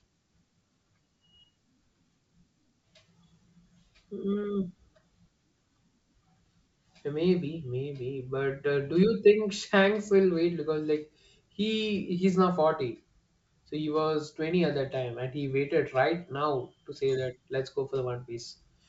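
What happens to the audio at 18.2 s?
Nothing goes wrong at 18.2 s: the speech carries on intact through the G.722 wideband telephone coding, which at 64 kbit/s leaves at most a faint trace on the sound.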